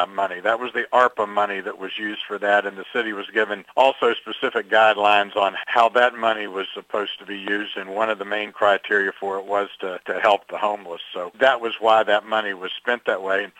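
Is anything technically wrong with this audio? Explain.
No, nothing technically wrong turns up anywhere in this audio.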